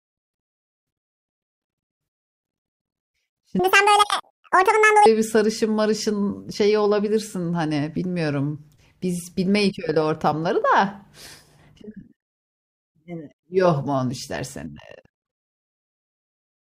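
A section at the wrong speed runs from 3.59 to 5.06 s, where the speech is played back at 1.88 times its recorded rate. Because speed and pitch move together, that stretch of about 1.5 s jumps up by roughly ten semitones and sounds chipmunk-like and rushed, then snaps back to normal. The likely cause is an edit or playback step that clocked this portion at the wrong rate.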